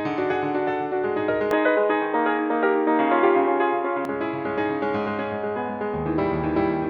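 At 1.51 s the music suddenly goes dull and boxy, with nothing above about 3.9 kHz, a level shift of roughly 5 dB, and fresh background noise sitting well under the music. There's no gap at the changeover. It stays like that until 4.05 s, then snaps back to full bandwidth. That's most likely the input switched to a poorer device partway through, some narrower-band mic or headset path with its own tone and noise, before switching back.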